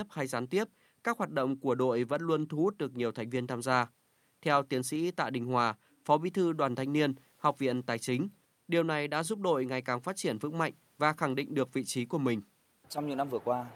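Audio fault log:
No technical fault is audible at any point in the speech recording.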